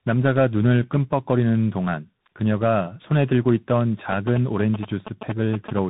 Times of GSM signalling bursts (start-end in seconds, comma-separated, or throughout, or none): 4.12-5.79